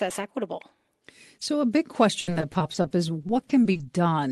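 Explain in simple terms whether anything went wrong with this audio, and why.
Something did go wrong: repeated packet loss, giving a robotic sound, from 2.21 to 3.81 s, just after "a big". Over and over, small pieces of the call audio arrived late or not at all, and the receiver filled each hole by stretching the last bit it had. About a quarter of that stretch is patch-up rather than real sound, with the longest hole around 60 ms. A single dropout would be one brief skip. Here the holes come in quick succession, so the sound turns choppy.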